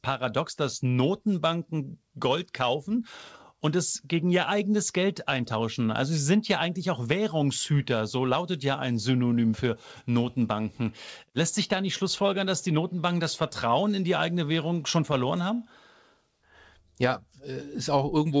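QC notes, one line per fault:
No faults to note, one line for the whole clip.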